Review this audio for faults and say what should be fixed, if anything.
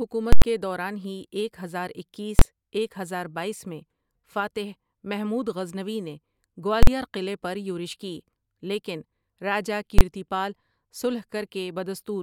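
A calculation produced invalid numbers that were pinned to full scale, giving invalid numbers at full scale: loud bangs at 0.33–0.42 s (before "کے دوران ہی ایک"), 2.39–2.42 s (between "ہی ایک ہزار اکیس" and "ایک ہزار بایس میں"), 6.83–6.87 s and 9.99–10.01 s. The lengths of about 93, 23, 46 and 23 ms fit whole processing blocks of 4096, 1024, 2048 and 1024 samples. Check each block for infinite or invalid values and replace them with silence before output.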